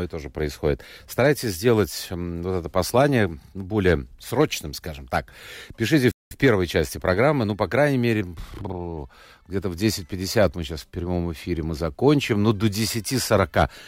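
At 6.11 s the speech just drops out, and nothing comes through until 6.31 s, a gap of about 195 ms, before it picks up again with "в первой части программы". That's a playback stall: the output goes silent in mid-flow rather than fading or glitching. The likely cause is the player running dry of buffered data, or its audio thread getting held up, so there was simply nothing to send out until it caught up.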